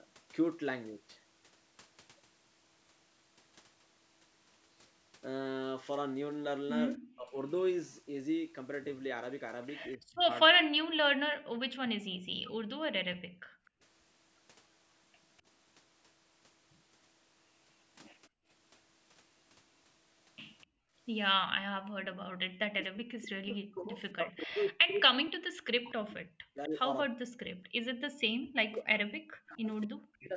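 Speech suppressed in double talk at 6.96 to 7.37 s: the speech drops by roughly 40 dB for about 0.4 s, likely because an echo canceller, hearing both sides at once, turned the local talker down along with the loudspeaker echo.

Echo leak at 9.92 s: a faint copy of the speech, some 30 dB below it and trailing by 252 ms, slips through, likely because the canceller left part of the loudspeaker pickup in the microphone signal.

Speech suppressed in double talk again from 9.97 to 12.52 s: the speech repeatedly sinks by up to roughly 40 dB, for about 1.5 s in total.

Background gated by the echo canceller at 13.15 to 13.83 s: the room sound falls away by about 35 dB for around 0.7 s while the loudspeaker plays, then returns.

Echo leak at 13.65 s: another faint echo appears, about 35 dB down, again 252 ms behind, which points to the same leaking speaker path.

Background gated by the echo canceller at 18.29 to 18.48 s: the room sound dips by about 31 dB. 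It dips again at 20.66 to 20.95 s, this time by about 40 dB.

Speech suppressed in double talk from 21.43 to 30.35 s: the speech keeps dropping out in pieces, by up to roughly 40 dB, for about 7 s in all.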